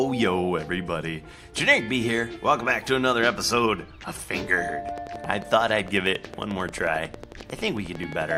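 From 4.89 s to 8.32 s a train of clicks runs over the audio: roughly forty sharp, near-identical pulses at a regular 11.1 per second, peaking a few dB above the programme level. The steady spacing and repeated shape point to something injecting a periodic pulse, likely electrical interference from nearby equipment or a faulty connection or power supply. It sounds like a fast, even ticking that stays audible through quieter passages.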